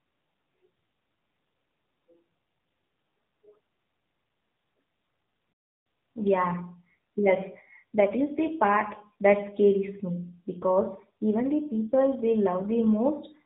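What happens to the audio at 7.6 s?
At 7.6 s the speech is still passing through the AMR narrowband mobile codec, as it does for the whole clip. The low-rate vocal-tract coding, consistent with roughly 7.4 kbps, leaves the voice plainly buzzy and synthetic, with nothing above about 3.8 kHz.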